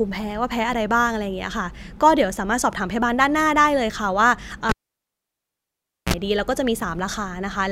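At 4.69 s the speech breaks off with a sharp pop as a live cable is pulled and plugged in again. For about 1.39 s only near silence remains. A 43 ms burst of 60 Hz mains buzz follows as the plug tip touches first, then another pop at 6.14 s brings the sound back. A waveform shows two spikes around a flat gap, and a spectrogram shows broadband pop columns with short harmonic stripes at 60 Hz.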